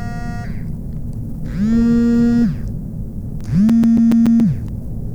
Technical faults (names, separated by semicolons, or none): CD scratch ticks